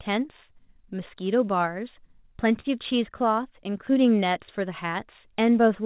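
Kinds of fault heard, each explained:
Short stall from a late packet: At 2.6 s a packet of the call audio came in late, and the jitter buffer ran dry. The receiver stretched the last sound for 40 ms, until 2.66 s, then carried on from the same point. Nothing is lost. The held sound is drawn out briefly, with a faint buzzy dip. Everything after it runs 40 ms later. The audio stops at 4 kHz, which fits a G.711 call codec.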